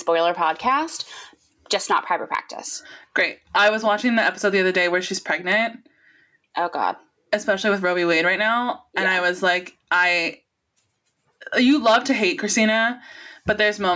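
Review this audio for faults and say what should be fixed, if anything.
Gain pumping throughout: the gain swings about 10 dB under loud speech, likely from excessive microphone gain driving a fast limiter. To prevent it, lower the input gain so the limiter rarely engages.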